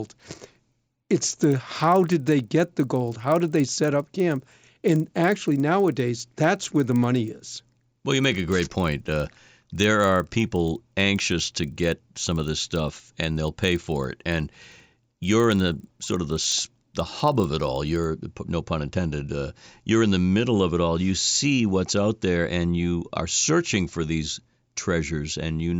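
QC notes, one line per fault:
0.00–18.04 s, resampler restarted on every block: a steady 25 Hz buzz rides under the speech and stops when the speech pauses. Each 40 ms block was converted alone, so every block edge gets a small error. This fits a 16 kHz to 48 kHz conversion.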